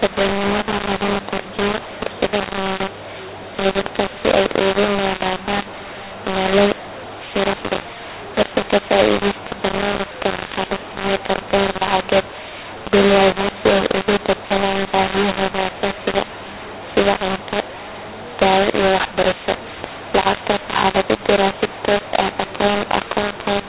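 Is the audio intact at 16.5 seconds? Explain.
No, at 16.5 s the mu-law and A-law mix-up, present throughout, corrupts the sound. The telephone audio was coded with mu-law but decoded as A-law, so sample levels come out scrambled and the quietest ones rise well above silence, making the speech harsh and distorted and filling pauses with noise.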